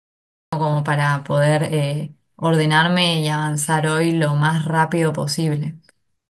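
Digital silence runs until 0.53 s, then speech begins abruptly mid-sound: a cut-off start, recording began late. The waveform jumps from flat silence, the spectrogram shows a vertical edge, no attack.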